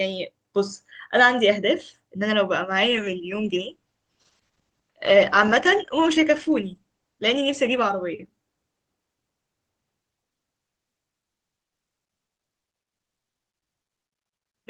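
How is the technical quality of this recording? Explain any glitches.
The recording suffers one clear fault: a call bitrate drop running from 2.7 s to 9.37 s. The call's bandwidth estimate fell, so the encoder was forced to code the speech with far fewer bits, and the sound fits a cut from about 48 kbps to roughly 14 kbps. At that rate the codec quantises coarsely and discards the upper frequencies, so the speech turns muffled and rough, with a watery texture. It sits at its worst for about 4.85 s before the bitrate climbs back and clarity returns.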